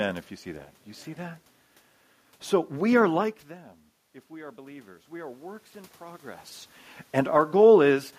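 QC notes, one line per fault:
4.28–6.51 s, automatic gain rising: gain control slowly added about 4 dB after the input fell about 18 dB, so voice and room noise swell together.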